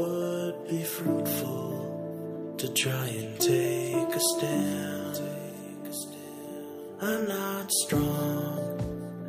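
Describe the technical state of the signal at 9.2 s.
At 9.2 s the signal is intact, with no dropout, distortion, glitch or other audible fault at that moment.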